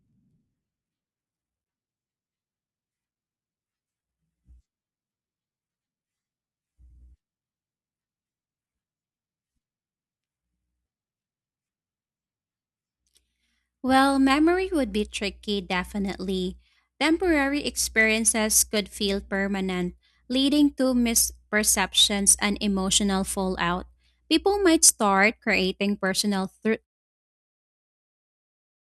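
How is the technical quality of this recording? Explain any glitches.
No glitches are audible anywhere in this speech recording.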